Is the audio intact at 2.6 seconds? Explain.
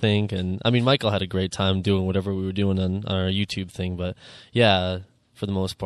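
No. MP3 compression affects the whole clip, including 2.6 s: the treble is cut off and weak components flicker frame to frame, giving a watery, swirly sound, likely from a 64 kbps encode.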